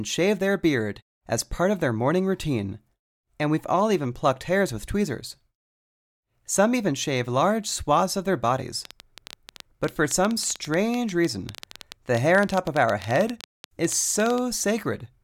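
Speech, with a train of clicks from 8.85 to 14.39 s, starting after "swaths of their bodies": around fifty similar pulses at about 10 per second, irregularly spaced, some about 10 dB above the voice, ticking through pauses too, likely interference; matching shapes distinguish it from random crackle.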